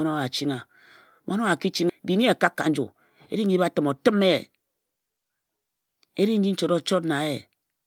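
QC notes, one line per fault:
1.89–1.91 s skip ahead: right after "ki ching", around 0.4 s of speech vanishes and the sides join with no silence, unlike a dropout, which leaves a gap.
1.99–3.50 s jitter buffer speed-up: speech runs about 7% fast, hurried but at unchanged pitch, as repeated trims of pitch periods remove roughly a tenth of a second before "batim o tim ye".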